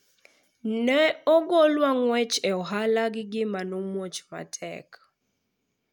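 No dropouts, clicks, distortion or other technical faults are audible anywhere in this speech recording.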